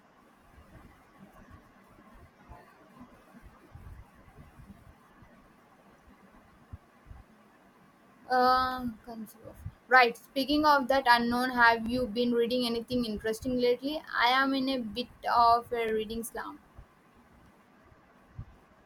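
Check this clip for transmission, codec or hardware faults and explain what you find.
There is one fault: overlapping chunks in the speech, at 3.82–3.84, 7.84–7.86, 11.86–11.89 s (between "of that unknown have" and "you been reading anything") and 15.89–15.91 s (before "reading slump"). Each 4-second chunk begins about 23 ms before the previous one ends, so that sliver replays as a brief stutter. Dropouts would leave gaps, but here nothing is missing, and the repeats fall on a strict 4-second grid.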